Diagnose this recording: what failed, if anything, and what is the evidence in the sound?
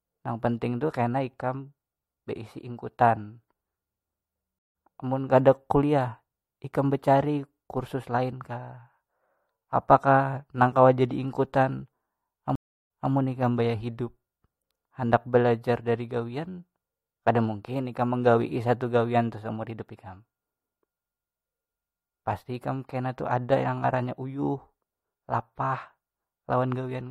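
The network stream dropped and the player reconnected twice, a stream reconnect each time. At 4.59 s the speech goes fully silent for 161 ms and picks up roughly 150 ms further on, skipping material. At 12.55 s a 343 ms gap is followed by a restart 213 ms earlier, repeating a short stretch as the server resends buffered audio. A spectrogram shows clean full-band blank columns, and the waveform shows a flat line with a brief ramp-in where each fresh decoder starts.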